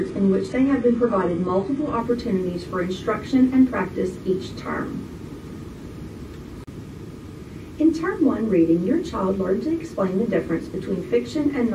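From 0.0 to 2.0 s, an adaptive stream starting at a low bitrate leaves treble dull, the spectrogram bare above 11.4 kHz, before a gapless step up.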